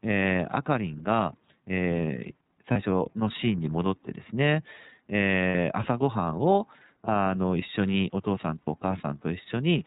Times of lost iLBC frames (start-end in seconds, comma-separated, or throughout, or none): 2.72-2.76, 5.49-5.55, 8.62-8.68